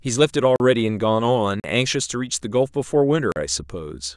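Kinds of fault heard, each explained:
Block of digital silence: three short holes, at 0.56, 1.6 and 3.32 s, each about 40 ms long, where the speech drops abruptly to silence and returns without any fade, as when an output buffer goes unfilled.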